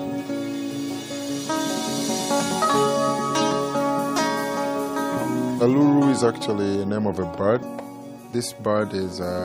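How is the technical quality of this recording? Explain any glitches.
No glitches turn up anywhere, with nothing breaking the continuity of the signal and no dropouts, clicks or distortion to note.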